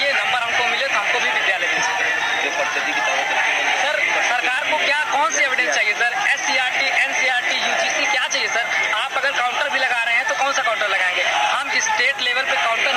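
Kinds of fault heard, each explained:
Timecode bleed: Linear timecode from an adjacent track or cable has leaked into the audio and sits underneath it for the whole clip. The code's square wave flips between pitches around 1 and 2 kHz at a 30-frames-per-second rate, roughly 20 dB below the wanted sound, giving a constant chirping warble. A steady whine or hum holds one pitch; this rapid two-pitch toggling, patterned by the frame rate, marks it as timecode.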